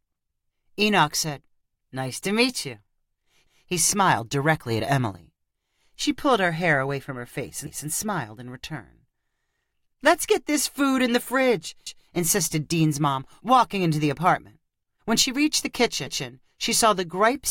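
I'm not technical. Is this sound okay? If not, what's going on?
No. The recording was handled in pieces about 4 seconds long, and each piece began slightly before the previous one finished. This is called overlapping chunks. At every join, about 0.2 seconds of speech plays twice, heard as a small stutter or hiccup every 4 seconds. It happens at 7.67 s after "away from her face", at 11.87 s after "food in the fridge", and at 16.07 s after "she reached the".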